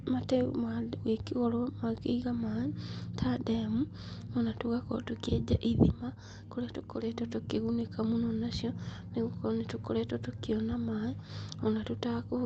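Nothing goes wrong anywhere in this speech recording, which simply carries the usual character of an Opus call connection, with the top end rolling off around 8 kHz.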